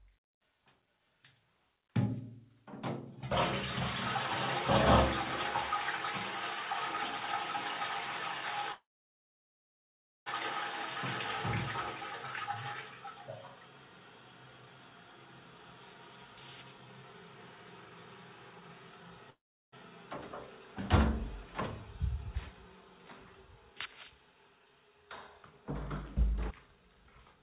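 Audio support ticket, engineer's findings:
Call audio freeze at 8.72–10.28 s (about 1.5 s, mostly silent) and 19.30–19.74 s (about 0.4 s). Likely packets held up and the jitter buffer running dry. Audio resumes where it stopped, nothing lost, just later.

Jitter buffer speed-up at 16.81–19.12 s (109% speed, roughly 0.2 s trimmed) and 22.08–23.34 s (107%, about 0.1 s). Buffer over target after late packets arrive in bursts, so it clips short chunks to catch up. Same pitch, sounds a bit rushed.

Skip ahead at 26.51 s. About half a second of audio dropped, either in transit or by an overflowing buffer. Playback jumps forward, joined almost seamlessly.

FYI, nothing above 4 kHz throughout, which fits a narrowband G.711 call path.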